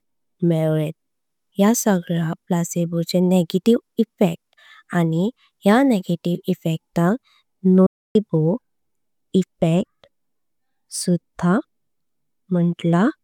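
From 7.86 to 8.16 s the speech cuts out completely for about 284 ms, then resumes as if it had played on through the gap. This is a Bluetooth dropout, likely from audio packets reaching the headphones too late. The waveform shows a flat, sharp-edged hole, and the spectrogram a blank vertical band.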